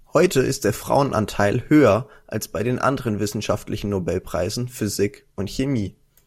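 A short bit of speech, and nothing technically wrong turns up anywhere in it.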